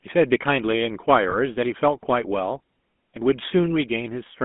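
Throughout, the speech carries GSM full-rate codec damage: a buzzy, gravelly roughness from coarse pulse-driven vocal-tract modelling, which fits the 13 kbps full-rate coder. Bandwidth is confined to roughly 200 Hz to 3.5 kHz, giving a narrow, telephone-like tone.

At 1.30 to 1.35 s, lost GSM frames produce a short, rough metallic ring. The decoder repeats the previous good frame's parameters instead of the missing data. The brief duration fits a single 20 ms frame dropout.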